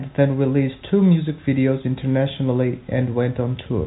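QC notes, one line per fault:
No fault to note for these QC notes.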